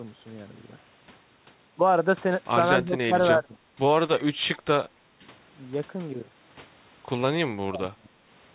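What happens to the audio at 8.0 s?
Speech suppressed in double talk, 7.47–8.14 s: likely an echo canceller ducking overlapping talk, so the speech drops by about 25 dB at its deepest.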